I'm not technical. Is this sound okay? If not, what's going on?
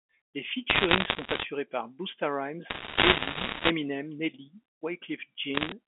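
No. There are bursts of bit errors on a digital phone line from 0.70 to 1.44 s, 2.70 to 3.70 s (the heaviest), and 5.54 to 5.72 s. Scattered damaged samples make sharp ticks and crackle, but unlike dropouts, the speech underneath never cuts out or changes.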